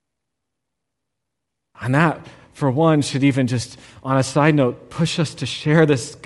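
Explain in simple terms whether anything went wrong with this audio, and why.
Yes, something went wrong, and it lasts from the first second to the last. The speech has a breathy, grainy edge, with the upper part of the sound replaced by a hiss-like texture. The likely cause is Bluetooth LC3 compression, the codec used by Bluetooth LE Audio. It squeezes sound into very short slices and, to save data, discards much of the high end and fills the gap with noise, which produces that rough sheen.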